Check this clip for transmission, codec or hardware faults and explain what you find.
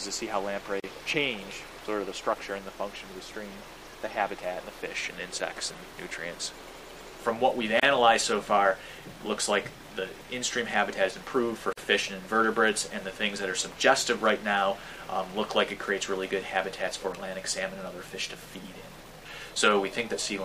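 Three short silences break otherwise continuous sound, each a gap at a join of encoded pieces: at 0.80 to 0.84 s (37 ms), 7.80 to 7.83 s (31 ms), and 11.73 to 11.77 s (46 ms). The audio was encoded in separate pieces and spliced without trimming, so each piece's start-up delay and padded final frame survive as dead air. The sound drops out with blurred edges, then resumes exactly where it stopped.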